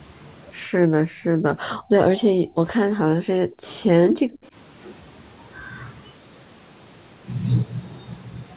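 The speech dips at 0.68–1.94 s, 2.11–2.61 s, 2.88–3.64 s, 3.80–3.87 s and 4.03–4.55 s. The deepest drops reach roughly 40 dB, and the one near 3.8 s is slight. The likely cause is speech suppressed in double talk, where the echo canceller mistook the talker for echo and turned it down.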